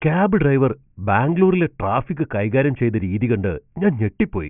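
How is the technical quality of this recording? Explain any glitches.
Nothing to flag here: the speech comes through without a single technical glitch worth pointing to.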